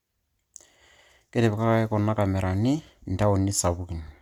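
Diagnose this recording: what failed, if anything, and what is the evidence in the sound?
Codec stage: hollow, smeared speech with blurred attacks throughout, likely generation loss from about five MP3 re-encodes. The spectrogram shows holes, smeared onsets and nothing above 20.1 kHz.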